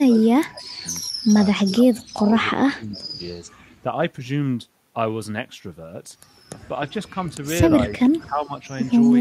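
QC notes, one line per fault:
0.0–0.85 s, 1.61–2.34 s, 2.56–3.2 s, 7.96–8.54 s: speech suppressed in double talk. Each span drops by up to about 25 to 30 dB. This is likely an echo canceller turning down the near talker along with the loudspeaker echo while the far end also spoke. The waveform envelope is notched and the spectrogram fades across bands.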